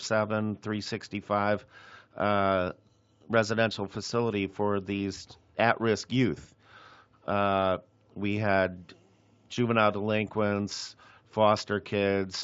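Nothing technically wrong turns up in this bit of speech, and the Speex coding it went through leaves at most a faint trace.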